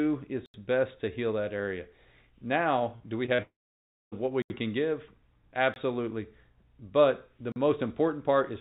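At 0.46 s the sound cuts abruptly to dead silence and back at 0.54 s. This is an 80 ms block of digital silence. The edges are hard, so the hole sounds like a short abrupt gap. The playback stage filled that stretch with zeros, most plausibly because the output buffer wasn't supplied in time, and there was no fade in or out.

Just before "do we", from 2.96 to 3.02 s, there is a brief smeared stretch. This is a short concealed packet loss: about 40 ms of audio never reached the decoder, and the receiver extended the preceding sound to bridge it before blending back. After "do we" the same wobble recurs twice, at 3.26 to 3.30 s and 3.36 to 3.40 s, each covering roughly 20 ms of lost audio.

From 3.42 s the sound turns into a fading synthetic continuation, then roughly 0.6 s of silence, and real audio only returns at 4.14 s. About 0.7 s is missing outright. This is a long network dropout, likely packets ceasing to arrive for that whole stretch, with concealment giving up once the fill had decayed.

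Further blocks of digital silence follow with the same hard edges: 80 ms at 4.42 to 4.50 s, a short 20 ms gap at 5.74 to 5.76 s, and 40 ms at 7.52 to 7.56 s. Throughout, the audio is band-limited with nothing above 4 kHz, which fits a narrowband telephone codec such as G.711.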